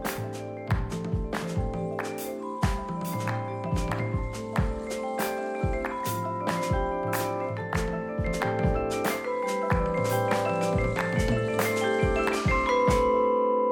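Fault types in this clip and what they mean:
No audible faults detected.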